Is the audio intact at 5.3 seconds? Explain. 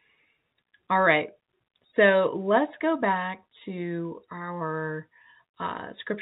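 Yes, the audio is intact at 5.3 seconds, with no fault heard at that moment.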